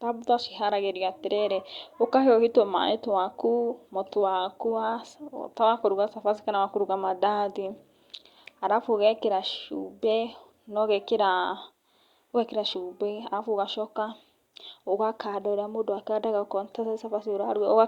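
Speech recording, no technical faults detected.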